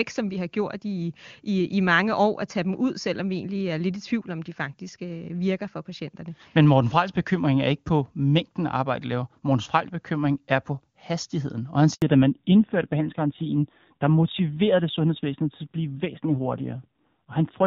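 At 11.94 s the speech cuts to silence for 80 ms until 12.02 s. This is a handover gap: no speech frames arrived while the call switched networks.

From 12.02 s to the end, nothing above 4 kHz remains and the voice sounds duller and rougher. This is a fallback to narrowband from the clearer HD Voice wideband codec, and it fits low-rate AMR narrowband.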